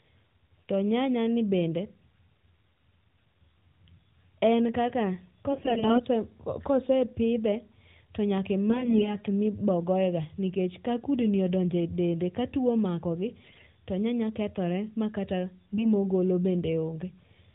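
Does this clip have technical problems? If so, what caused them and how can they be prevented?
Yes. AMR bit errors are heard at 5.52–6.00 s, at 8.69–9.17 s between "to nyaka" and "ma ibo goye", at 13.44–13.64 s just before "to nyanya kethore ma", and at 15.73–15.86 s between "nyanya kethore ma kata" and "ma ogolo". In each burst the speech stays near its pitch and level but turns hoarse, scratchy and gargly. The first burst is the roughest, which fits a heavier error rate of around a fifth of the bits. The mechanism is a degraded radio link flipping the weakly protected bits of the AMR frames while the checksum over the critical bits still passes. The decoder therefore misplaces its excitation pulses and gets the fine pitch, gain and spectral values wrong. This happens across the 20 ms frames of the 12.2 kbps narrowband stream, whose 4 kHz ceiling is audible throughout. A stronger radio link or more robust channel coding, such as a lower AMR mode with more error protection, would prevent it.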